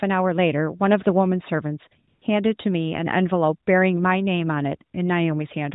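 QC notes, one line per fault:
2.08–2.22 s, AMR comfort noise: background briefly becomes a smooth, steady hiss for 140 ms; the phone sent no speech frames, so the receiver synthesised filler.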